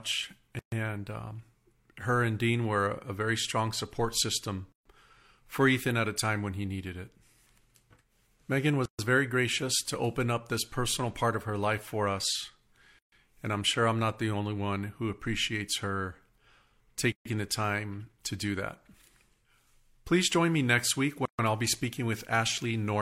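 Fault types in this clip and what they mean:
Gap at a join of encoded pieces: separately encoded segments joined untrimmed, leaving a gap of about 133 ms with smeared edges every 4 s, speech resuming where it stopped.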